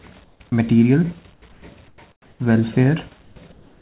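Early on, from 0.24 to 0.4 s, the quiet background between sounds gets swapped for comfort noise in place of the background: a flat, featureless hiss with none of the real room detail, sitting about 5 dB lower than what it replaces. That's likely discontinuous transmission kicking in, with the receiver synthesising noise while the sender goes quiet. The same swap recurs at 1.34–1.42, 1.52–1.62, 1.88–1.98, 2.12–2.4 and 3.22–3.36 s, and again from 3.52 s to the end, each time roughly 2 to 7 dB quieter than the real background, which itself sits some 32 to 38 dB below the loudest parts.

At 0.5 s there's a brief case of sound dropped by the voice detector. For about 20 ms the audio turns to that same steady noise, and roughly 10 ms of actual sound is lost. The likely cause is the detector mistaking a quiet tail for background and cutting transmission a touch early, so the sound clips off before the noise takes over.

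Throughout, nothing comes through above 4 kHz, which fits a narrowband call codec such as G.711 A-law.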